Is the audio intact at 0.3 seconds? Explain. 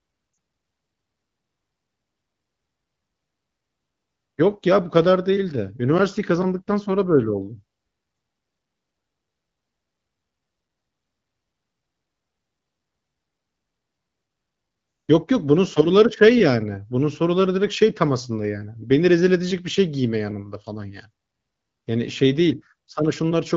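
No. Right around that point, from 0.33 to 0.37 s, there are lost AMR speech frames: two frames, about 40 ms, failed their checks and the wideband decoder filled them by repeating the last good pitch and vocal tract settings at falling gain. The sound fades to near silence within the two frames before recovering weak or rough for a moment. On a spectrogram the harmonics freeze into flat, smeared bands that fade. The waveform shows a short amplitude sag.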